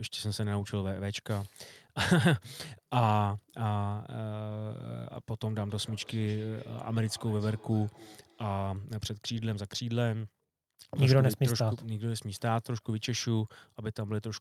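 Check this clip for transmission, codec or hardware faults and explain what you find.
There's one fault here: a feedback echo between two devices, from 5.57 to 8.67 s. A second device in the room replays the speech, this microphone catches it again, and the local canceller can't remove it, so the sound returns about every 300 ms, thin and ringing, peaking about 24 dB below the speech.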